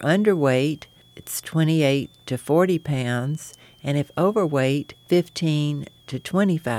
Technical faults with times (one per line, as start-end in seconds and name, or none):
0.00-6.79 switching supply whistle